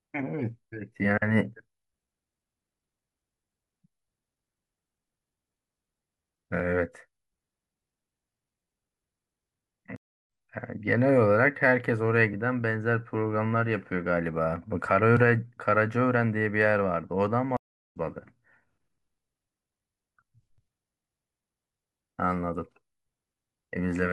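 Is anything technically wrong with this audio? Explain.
Yes, there are two stream reconnects. At 9.96 s the audio drops out for about 0.31 s, and at 17.57 s for about 0.35 s. Each time the connection broke and the player restarted decoding mid-stream, so the speech picks up slightly later: a fraction of a second first, then nearly half a second.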